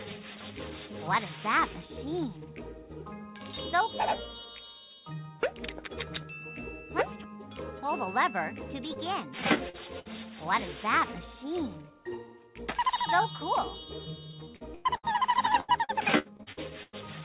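At 8.94 to 8.98 s and 9.69 to 9.75 s, short concealed packet loss leaves brief smears where missing audio was extrapolated. On a spectrogram these are short stretches of smoothed, repeated harmonics.

A burst of packet loss from 9.99 to 10.07 s drops about 60 ms. The receiver holds the last sound and fades it, so the waveform shows a decaying plateau before the audio resumes later on.

Repeated packet loss (robotic sound) runs from 14.31 to 15.16 s and again from 15.60 to 16.95 s. Each stretch has seven gaps of up to about 100 ms, patched roughly a third of the time. The result sounds choppy, and the spectrogram shows a chain of smeared blocks. Throughout, the call path's band stops at 4 kHz, which fits G.711 telephone coding.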